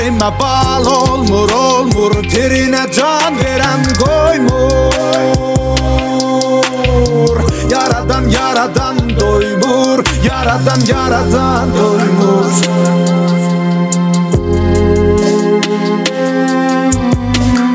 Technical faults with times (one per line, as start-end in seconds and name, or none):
0.00-17.74 gain pumping